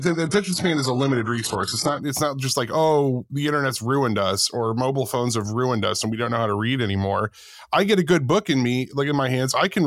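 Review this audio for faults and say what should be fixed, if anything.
From 0.0 to 2.0 s the speech sounds dull and swirly, with nothing above 11.5 kHz and synthetic-sounding treble. Clarity then jumps abruptly, with no gap, just before "it's not just like". This is an adaptive stream starting at a low bitrate. The sound fits a 12 kbit/s HE-AAC version stepping up to 96 kbit/s AAC-LC once the connection had been measured. To prevent it, start playback on a higher-bitrate version or estimate bandwidth before the first segment is chosen.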